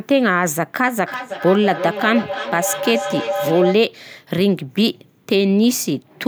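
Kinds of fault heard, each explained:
Feedback howl: a microphone is picking up a loudspeaker playing the same call, so each trip around that loop comes back a bit louder instead of dying away, and the sound narrows to whatever pitch the loop favours. Here it starts at 1.0 s under the speech, settles into a tone around 500 Hz that pulses roughly every third of a second, peaks at about 6 dB below the speech, and stops at 3.84 s.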